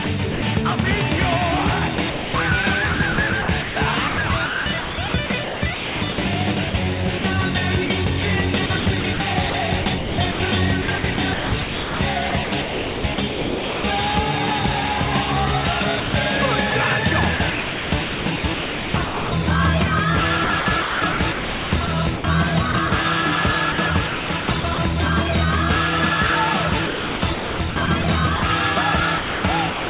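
Choppy gaps filled with flat, synthetic hiss break the sound from 0.04 to 0.42 s, 1.96 to 13.84 s, 16.0 to 19.32 s, 20.44 to 24.78 s and 26.7 to 29.9 s. This is sound chopped by the voice detector, likely switching transmission off and substituting comfort noise.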